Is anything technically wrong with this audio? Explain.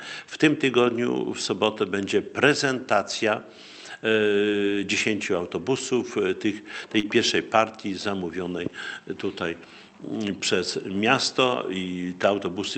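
Yes, there are two packet-loss faults close together near 7 s, heard through an Opus call path whose band stops at about 8 kHz.

From 6.99 to 7.09 s there is a short concealed packet loss. About 40 ms of audio failed to arrive in time, so the receiver extrapolated the preceding sound for 39 ms and crossfaded back. The result is a brief smear or wobble with a slight stretch.

Inside that span, at 7.03 to 7.05 s, there is a lost packet rebuilt from error correction. A 20 ms packet was lost, and the decoder played the low-bitrate copy carried in the next packet instead. There is no gap, but that segment sounds rougher and noisier than its surroundings.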